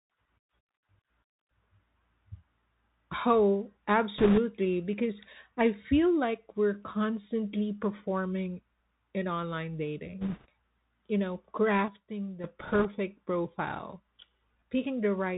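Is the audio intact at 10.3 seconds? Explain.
No. Bit errors on a Bluetooth voice link cover 10.21 to 10.46 s, just after "constantly performing in online". Around 3 percent of the bits on the headset link are flipped. Each bit in this one-bit-per-sample stream carries the same small weight, and any wrong step fades quickly as the step size adapts, so there are no sharp clicks. Instead, a rushing, crackly noise spreads across that quarter-second.

Underneath, the Bluetooth CVSD headset codec degrades the whole clip, including this moment. It encodes each sample as a single up-or-down step at a rate that fits a 64 kbps link, adjusting the step size as it goes. Nothing above about 4 kHz survives, so the speech sounds boxed and narrow. A grainy hiss sits beneath it, s sounds turn scratchy, and loud, bright sounds distort where the signal changes faster than the step can follow.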